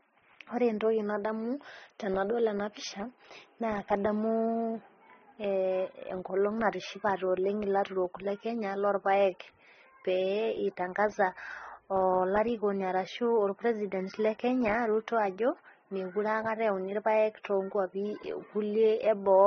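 Throughout the whole clip the speech sounds dull and smeared, with nothing above 6.4 kHz, plus two kinds of codec artefact heard together. This points to transcoding between lossy codecs, likely a low-bitrate AAC-LC stage near 24 kbit/s followed by MP3 near 33 kbit/s. The MP3 stage spent its bits re-encoding the earlier damage and added its own, while the lower bandwidth limit remained.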